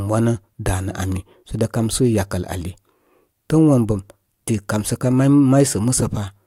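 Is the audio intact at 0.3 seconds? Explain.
Yes, the audio is intact at 0.3 seconds, with no fault at that moment.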